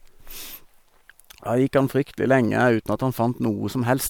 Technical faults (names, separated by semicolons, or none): none